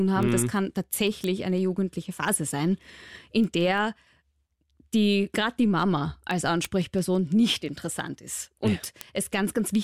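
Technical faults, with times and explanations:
0.23 to 9.69 s, word clock ticks: a steady train of sharp clicks of uneven strength through the speech, roughly every 0.15 s, around fifty in all, each a single-sample slip where an unlocked receiving clock drifts past the sender's, which points to a clock error of about 150 ppm.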